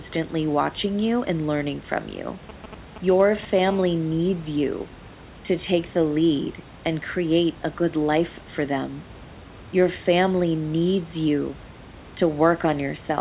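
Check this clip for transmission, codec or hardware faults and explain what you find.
Two bursts of phone interference sit early in the speech, one right after the other, heard against a band that stops at 4 kHz, which fits a G.711 A-law call codec.

From 2.49 to 3.69 s, GSM signalling bursts: a galloping dit-dit-dit of short 217 Hz buzzes, roughly 15 dB below the speech. A nearby 2G phone's intermittent radio bursts are being rectified by the audio circuitry.

From 3.69 to 4.89 s, GSM phone buzz: a steady, hard, raspy 217 Hz buzz rich in harmonics, about 24 dB below the speech. The phone is now transmitting continuously, pulsing 217 times per second.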